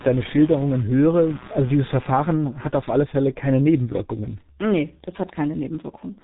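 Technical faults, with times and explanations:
Throughout: G.723.1 codec. The speech sounds muffled, hoarse and boxed-in, with consonants smeared together and nothing audible above 3.8 kHz. The damage is heavy, and its character fits a low-rate telephony codec running near 6 kbit/s. It chops the signal into 30 ms frames and rebuilds each one from a coarse voice model that adapts slowly. Fine detail and quick transitions between sounds are lost, leaving the voice rough and indistinct.
0.00 to 2.77 s: computer activity noise. A buzzy, chirping pulse train at roughly 150 Hz sits under the speech, about 20 dB below it, and then stops while the speech continues. It follows the computer's workload, not the sound. Shifting current drawn by the processor, graphics hardware or peripherals disturbs the ground shared with the audio circuitry, so that activity leaks into the recording as a rhythmic electrical buzz.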